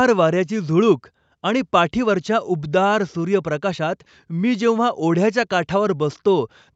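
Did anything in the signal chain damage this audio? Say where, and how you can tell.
No, nothing in the chain damaged this speech: the top of the band stopping around 8 kHz is just what the call's microphone processing and Opus call path do by design, and you can't hear anything there that points to a problem.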